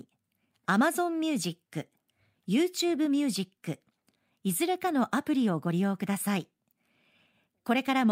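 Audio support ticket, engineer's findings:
No faults found on listening; speech path reviewed, nothing to attribute to any component, no action required.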